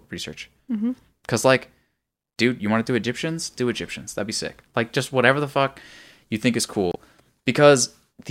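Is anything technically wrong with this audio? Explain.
Yes. Right after "fuck you think is", from 6.90 to 6.96 s, the speech breaks up briefly. This is damaged data in a compressed stream: corrupted bytes made the decoder misread those frames, lose sync and jump to the next valid frame header.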